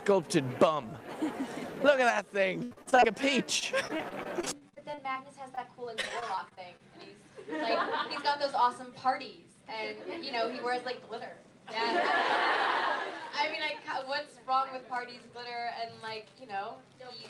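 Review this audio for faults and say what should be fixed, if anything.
Repeated packet loss, giving a robotic sound, hits three stretches. The first is 2.63 to 3.04 s and is the worst. Six gaps there are patched by repeating the last sound, covering 215 ms. Another 140 ms is simply missing, and the longest gap is 75 ms. About half that span is concealment, so it turns choppy. The second stretch runs 3.59 to 5.17 s, with fourteen gaps of up to 37 ms. The third runs 6.01 to 6.81 s, with seven gaps of up to 24 ms. To fix it, reduce network loss or add forward error correction so lost packets can be rebuilt.

A short stall from a late packet occurs at 5.55 to 5.59 s. One packet missed its slot, and the jitter buffer ran dry. The receiver held the last sound for 21 ms until the packet arrived, then carried on from the same point. Nothing is lost. The sound just lingers briefly, with a slight buzz or dip. 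The delay grew by 21 ms as a result. To prevent it, keep a slightly deeper jitter buffer so one late packet doesn't empty it.

A jitter buffer speed-up runs from 9.61 to 10.31 s. The buffer had built up extra audio, likely after delayed packets arrived in a burst. To shed that delay, the receiver cut many tiny pitch-period slices, about 40 ms in total. Playback runs at 104% speed with the pitch unchanged. To avoid it, steady the packet arrival timing so the buffer doesn't overfill and need draining.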